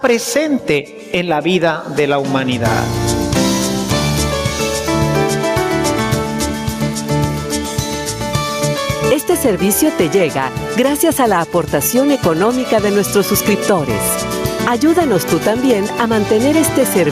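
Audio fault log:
Throughout: gain pumping. The level swings by around 15 dB. Loud and soft passages sit unnaturally close together, and the whole clip sounds squashed. This is likely the input gain being set far too high for the microphone. A fast limiter or compressor then clamps down on each peak and releases in the pauses.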